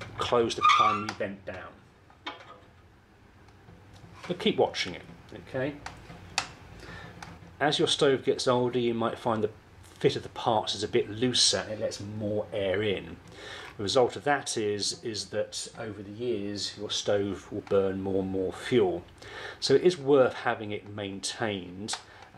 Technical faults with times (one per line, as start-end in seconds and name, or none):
none